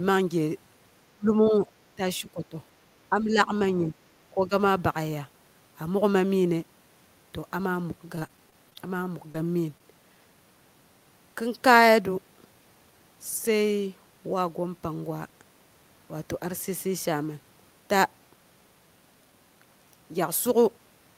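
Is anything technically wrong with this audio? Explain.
Yes. There are three kinds of fault in this speech clip.

From 1.13 to 4.52 s the talker's level keeps dipping in short patches: 1.13 to 1.67 s, 1.96 to 2.02 s, 2.19 to 2.57 s, 3.1 to 3.51 s, 3.79 to 3.9 s and 4.34 to 4.52 s. The first dip is the deepest, at about 25 dB. The others range from about 15 dB down to about 5 dB. This is likely speech suppressed in double talk. The echo canceller heard both sides at once. It could not tell the talker from loudspeaker echo, so it turned the talker down.

From 8.15 to 9.36 s there is repeated packet loss, heard as robotic sound. Short holes follow each other quickly, and none is longer than about 24 ms. Each hole is patched by carrying the last sound forward, and about 14% of that stretch is filled this way. So the speech turns choppy and robotic, with small pieces missing.

At 9.78 to 9.82 s there is a short stall from a late packet. 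The jitter buffer ran dry for about 19 ms. The receiver held the last sound until the packet arrived, then went on from where it stopped. Nothing is lost. A sound is simply held a touch too long, with a faint buzz or dip.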